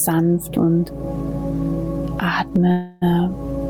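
From the start and through the whole clip there is gain pumping. The level swings by around 20 dB, while loud and soft passages sit squashed close together in level. This likely comes from the input gain being set far too high, with a fast limiter or compressor clamping down on each peak. Unlike a noise gate, nothing cuts to silence.

From 2.71 to 3.04 s there is a call audio freeze. For about 0.3 s the last bit of sound is stretched into a fading buzzy hiss. It never drops to silence, and then the audio picks up exactly where it left off. The likely cause is packets held up in transit so that the jitter buffer ran dry and the receiver filled the wait. What separates this from a packet-loss dropout is that nothing is skipped. A gap has been inserted, and everything after it plays about 0.3 s later.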